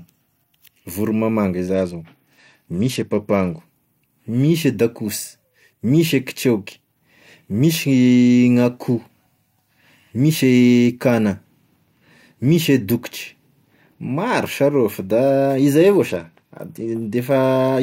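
Speech with two Bluetooth SBC bit pool drops, from 1.74 to 3.61 s and from 16.09 to 17.15 s. In both spans the treble goes dull and a gritty quantisation noise rises, then clears when the rate recovers. The sound fits the encoder cutting its bit pool from 28 to 11, about 90 kbps, to keep a congested link alive. That starves the highest sub-bands of bits and coarsely quantises the rest.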